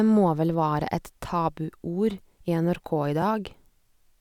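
A block of digital silence at 3.22 s interrupts this speech clip: for about 2.7 ms the signal drops out to silence and then resumes, with no fade on either side. Because the gap is so short, it registers as a single tick rather than an audible hole, the two hard edges merging into one click. A dropout of that length, which fits a 128-sample buffer, points to the program failing to deliver one output buffer in time.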